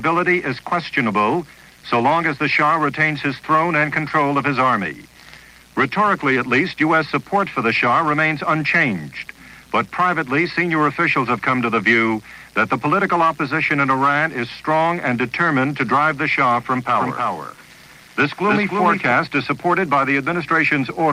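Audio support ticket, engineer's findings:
Likely a slower second capture path mixing the audio in twice. Doubled audio track, 16.98–19.12 s: dry copy roughly 300 ms late, about 5 dB down, abrupt start and stop.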